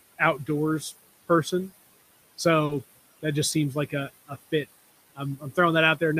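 Noise suppressor artifacts run through the whole speech clip. The suppressor pulls the room noise down by about 18 dB between phrases and lets it back up under the voice, so the residue shifts frame by frame. The room noise itself sits about 19 dB below the speech.

At 2.65 to 2.71 s, just before "that just seems like", there is short concealed packet loss. About 40 ms never arrived, and the decoder extended the preceding sound to cover the gap before blending back, giving a brief smeared wobble.

Overlapping it, from 2.69 to 2.79 s and still just before "that just seems like", a lost packet was rebuilt from error correction. About 60 ms, which fits three 20 ms packets, was played from low-bitrate in-band copies, so nothing drops out, but that stretch sounds rougher and noisier.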